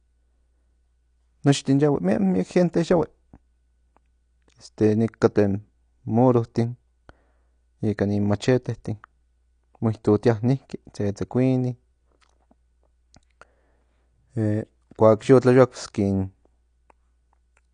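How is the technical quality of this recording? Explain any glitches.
The speech has plainly audible codec damage from start to finish, most likely from AAC compression. Nothing comes through above about 9.8 kHz, so the top end sounds dull and closed in. The encoder, which fits AAC-LC at around 32 kbps, lowers its cut-off and spends its few bits only on what the hearing model rates as important. What's left sounds smeared, with a watery, fizzy texture on sibilants and held sounds.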